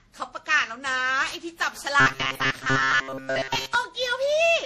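Generation loss runs through the whole of this speech recording: it sounds swirly, smeared and hollow, with blurred attacks and nothing above 15.6 kHz, likely from around seven rounds of lossy re-encoding, which fits MP3 at about 64 kbit/s, each pass adding fresh quantisation noise and spectral holes. Robotic sound from repeated short buffers follows from 2.00 to 3.75 s, a rigid metallic buzz at 133 Hz that tracks the speech only loosely, likely because audio arrived too seldom and a chunk of roughly 7.5 ms was replayed in place of most of the real signal.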